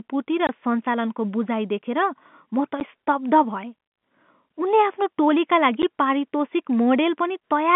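At 0.47 to 0.49 s, then 2.80 s and 5.82 s, the speech drops out in hard-edged gaps of 20 ms, 10 ms and 10 ms. That's packet loss filled with silence. The gaps fit 10 ms packets, cut out of the narrow telephone-band sound.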